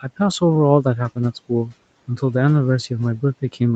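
The call's noise suppressor mistook parts of this speech recording for background noise and pulled them down with the room hiss. It happened at 0.02–0.2 s (a drop of about 13 dB) and at 1.49–1.73 s (about 10 dB), each time over roughly a tenth of a second. This is speech cut by the noise suppressor: those syllables sound swallowed and faint against the rest of the speech, whose band stops near 8 kHz as a call codec path would leave it.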